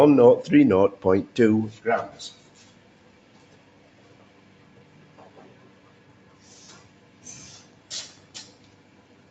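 Throughout, a noise suppressor applied to music or sounds treats sustained tones and tails as noise. Levels swing by roughly 10 dB, pumping and thinning. The waveform shows decays collapsing, and the spectrogram shows held partials flickering beneath a clean 8 kHz ceiling.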